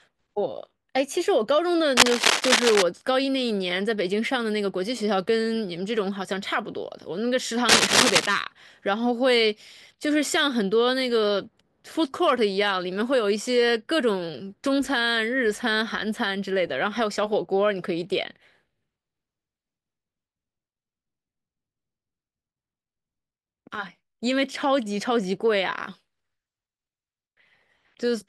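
A worn cable or connector was likely shifted, its contact resistance fluctuating rapidly: cable scratch noise from 1.97 to 2.82 s and again from 7.69 to 8.26 s. Each burst adds dense, uneven scratching over the speech, a little louder than the speech itself.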